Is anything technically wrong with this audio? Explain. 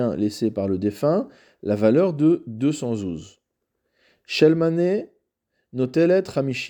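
No, nothing is technically wrong with this audio.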